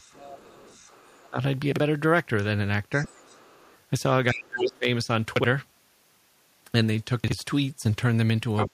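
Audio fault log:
0.0–1.3 s, 2.92–3.75 s, 4.57–4.78 s, 8.56–8.69 s: other side's voice leaking through. A second voice sits under the main speech, faint in the first two spans and nearly as loud in the last two, likely loudspeaker playback that the echo canceller failed to remove from the microphone.
1.3–1.37 s, 4.32–4.85 s, 8.68–8.73 s: speech suppressed in double talk. The main voice sinks sharply, by a large amount at its deepest, the longest dip lasting about half a second. These dips likely come from the echo canceller turning everything down when both sides spoke at once.
1.72–1.8 s, 5.36–5.44 s, 7.24–7.32 s: chunks out of order. In each of these moments a 40 ms piece of audio plays one slot late, after the piece meant to follow it. The sound briefly jumbles at the three hard joins where the audio is spliced.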